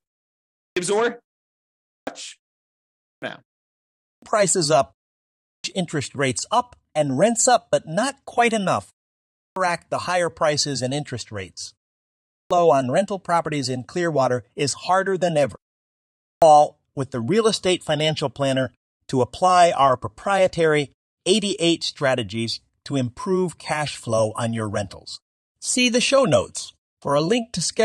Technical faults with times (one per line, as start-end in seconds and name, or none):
0.37-0.76 clipped start after a pause
1.64-2.07 clipped start after a pause
2.83-3.22 clipped start after a pause
3.76-4.22 clipped start after a pause
5.23-5.64 clipped start after a pause
9.15-9.56 clipped start after a pause
12.04-12.51 clipped start after a pause
16.02-16.42 clipped start after a pause